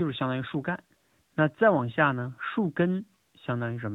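From start to finish the speech carries AMR narrowband mobile codec damage, and it is plainly audible. Everything above 4 kHz is gone, but unlike a simple low-pass filter the voice also sounds buzzy and synthetic, because it is rebuilt from a vocal-tract model and a few excitation pulses per 5 ms. The degree of buzz points to one of the higher modes, which fits a bitrate near 10.2 kbps.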